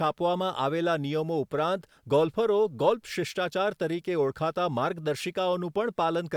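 No faults found anywhere in the speech; nothing needs flagging.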